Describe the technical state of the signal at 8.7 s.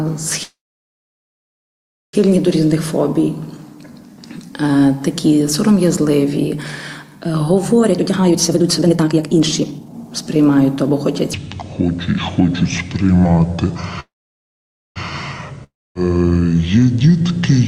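At 8.7 s the sound is rushed: it plays at roughly one and a half times normal speed while the pitch stays where it was. This is a jitter buffer speed-up running from 7.82 s to 11.21 s. The receiver's buffer had filled past its target, so it repeatedly cut out short slices one or a few pitch periods long, discarding about a second and a half of audio in total to bring the delay back down.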